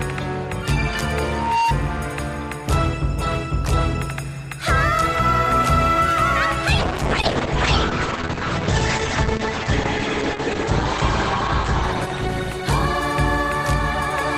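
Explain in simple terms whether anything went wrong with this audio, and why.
Two things went wrong. From 1.24 to 1.76 s there is loudspeaker feedback squeal: a steady 922 Hz tone swells over about a third of a second, unlike a random whistle or glitch. From 6.85 to 13.39 s a call bitrate drop makes the sound muffled and rough, losing its high frequencies. That points to the connection being squeezed rather than a faulty microphone.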